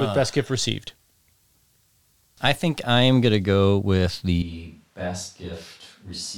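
Switch to a distant microphone at 4.42 s, lasting to the end: the speech abruptly turns roomy, hollow and thinner in bass, dropping about 10 dB, with room noise rising to about 30 dB below the speech. The close microphone's signal was likely lost, leaving a farther one.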